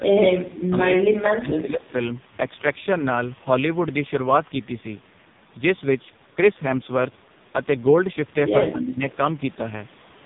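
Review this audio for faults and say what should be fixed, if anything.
The speech throughout has a buzzy, synthetic edge, with nothing above about 3.8 kHz, so sibilants sound dull and lisped. That is the AMR narrowband mobile codec working at its heavy-damage end, which fits the lowest AMR-NB mode near 5 kbps. At that rate the vocal-tract model gets very few excitation pulses per subframe, so the voice turns coarse and metallic. Prevention: carry the call over a wideband codec such as AMR-WB, or at least a higher AMR-NB mode.

A faint, thin copy of the speech surfaces briefly from 1.87 to 1.91 s, roughly a quarter second behind the original and well below it. It returns more noticeably from 9.08 to 9.17 s, at about 25 dB down and a delay of 256 ms (247 ms for the first). This is an echo leak, likely from a far-end loudspeaker whose echo canceller let part of the microphone pickup back into the call. 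Prevention: improve the far end's echo cancellation or have that side use a headset.

From 8.68 to 9.02 s the voice sags and partly drops away for about a third of a second, by around 15 dB at its deepest. This is speech suppressed in double talk. Both sides were likely talking at once, and the echo canceller could not tell the local talker from loudspeaker echo, so it attenuated everything. Prevention: use an echo canceller with better double-talk detection, or reduce loudspeaker coupling so less suppression is needed.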